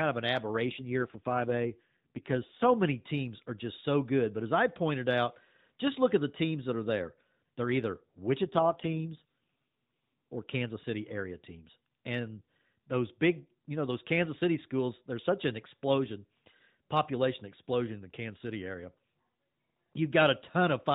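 From 0.60 to 2.73 s, and again from 8.44 to 10.36 s, the voice turns audibly rougher and more buzzy and synthetic, with no gap and no narrowing of the already phone-limited band. Each stretch is an AMR rate drop: the codec switched to fewer bits for the voice and more for error protection, and the degradation fits a fall from the 12.2 kbps mode to around 5.9 kbps. After each stretch the light AMR-NB colouring returns.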